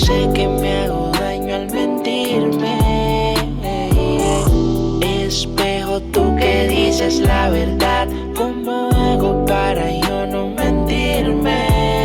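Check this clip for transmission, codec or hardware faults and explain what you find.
No faults turn up anywhere in this clip. There is nothing here to trace back to the signal path, so there is no mechanism to explain.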